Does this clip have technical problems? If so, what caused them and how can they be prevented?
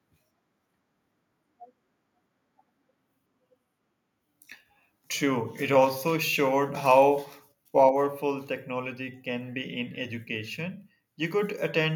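Yes. From 6.91 to 6.98 s the loudest peaks sound flattened and crackly. This is likely microphone overload. The signal went about 1 dB past the converter's limit, and the tops of a small fraction of samples were sheared off. Prevent it by lowering the input gain to leave headroom.

At 7.9 s, just before "technology can be in", the voice and background both drop by about 4 dB in one step. This is likely the microphone volume being stepped down by the call software after that distorted peak. Prevent it by setting a safe gain beforehand and disabling automatic input adjustment.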